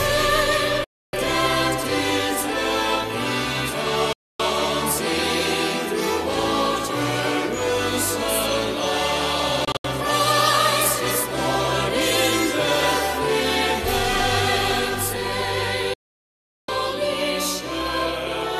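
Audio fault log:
0.84–1.14 s, 4.13–4.40 s, 9.65–9.85 s, 15.94–16.69 s, digital broadcast dropout: the receiver mutes with a 3 ms fade, dropping 288, 264 and 744 ms outright, plus scattered holes near 9.7 s (longest 72 ms), which fits lost frames of about 24 ms. It is clean silence, not hiss or static like an analogue fade, and the missing material never returns.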